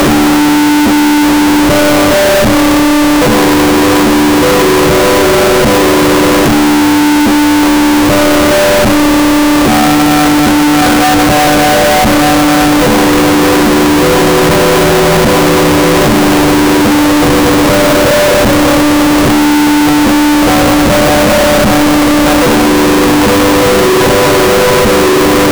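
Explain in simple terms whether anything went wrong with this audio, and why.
Something went wrong for the whole clip. The sound is extremely loud and harsh from start to finish. Quiet background noise is as loud as everything else. This is a fault called float read as integer. The audio was likely saved as 32-bit float numbers and then read back as 32-bit whole numbers. The software mistakes each number's layout for its size. So the waveform turns almost square, at an almost fixed, high level.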